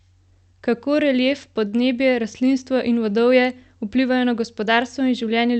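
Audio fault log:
1.67–1.80 s, short stall from a late packet: a packet turned up late and the jitter buffer ran dry, so the receiver stretched the last sound for about 50 ms, then picked up where it left off. Nothing's lost, just a briefly held spot with a slight buzz or dip right before "rastlinstvo in vodovje vplivajo".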